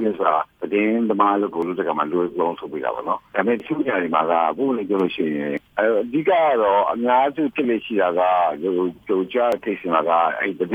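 Audio missing between chunks occurs at 1.62, 3.60, 5.57, 7.55 and 9.52 s. Each is a brief skip where a few tens of milliseconds of sound vanish and the surrounding material closes up with no silence in the gap. The skips recur at an even 2-second rhythm, likely because the recording or processing stage handles the signal in 2-second blocks and drops a sliver each time it finishes one block and starts the next.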